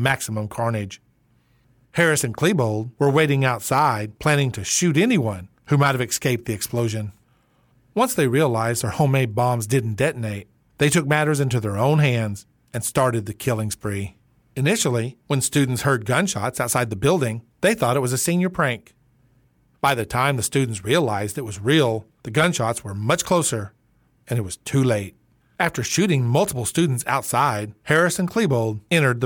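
A speech recording carrying a short burst of CD scratch ticks between 3.78 and 4.30 s: three brief ticks, each well under a millisecond, spaced roughly a quarter-second apart. That even spacing is the giveaway. A blemish on the disc passes the laser once per revolution, corrupting more data than error correction can repair, so the player patches or mutes those samples at a steady rhythm, unlike the random timing of vinyl crackle or network dropouts.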